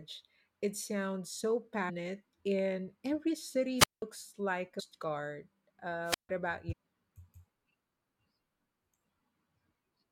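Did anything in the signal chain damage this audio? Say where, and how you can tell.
Yes. At the codec stage there is damaged data in the compressed stream: brief glitches at 1.88–1.90 s (between "sounds so" and "and every"), 4.79–4.81 s and 6.71–6.73 s. The decoder misread corrupted frames, lost sync and skipped ahead to the next valid header.

Before digitisation, on the radio link, there are two wireless microphone squelch dropouts: at 3.78–4.02 s, just after "and every", with a 187 ms silent gap, and at 6.04–6.29 s with a 151 ms gap. Each begins with a burst of hiss as the FM carrier fades, then the receiver's squelch mutes the output until the signal recovers.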